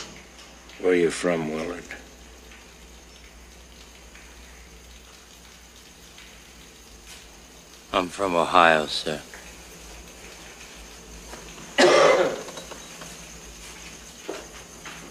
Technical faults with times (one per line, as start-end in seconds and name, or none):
none